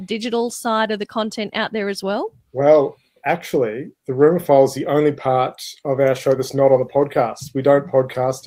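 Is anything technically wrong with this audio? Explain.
No, nothing is technically wrong.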